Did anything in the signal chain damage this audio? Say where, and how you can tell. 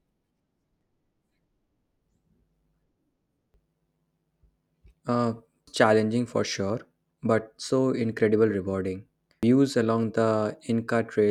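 Yes, there is damaged data in the compressed stream, at the codec decoding stage. Brief chirps or blips interrupt the speech at 0.81, 3.54 and 5.67 s, just before "challenging for sure but", and at 9.43 s, just after "but so incredibly rewarding". Corrupted bytes make the decoder misread frames and lose sync until it finds the next valid header. On a spectrogram, each shows as a thin vertical smear of unrelated energy, and the waveform breaks abruptly there.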